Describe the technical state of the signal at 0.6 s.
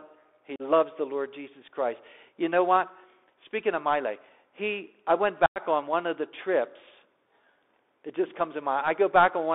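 Unconcealed Bluetooth headset packet loss runs from 0.56 to 0.62 s, with about 38 ms of audio missing. A handful of short voice packets between headset and phone failed to arrive, and nothing was done to hide the gap, so filler took their place. The result is a brief hole in the speech with hard edges, and the audio returns momentarily quieter as the CVSD step size recovers.

The Bluetooth CVSD headset codec is active at this moment too, as it is across the whole clip. Each sample is coded as a single up-or-down bit with an adaptive step, which fits a 64 kbps CVSD link, and the line passes only about 300 Hz to 3.6 kHz. The damage is plainly audible: everything above that band is gone, loud high-frequency energy outruns the step and distorts, sibilants turn scratchy, and a granular hiss sits beneath the speech.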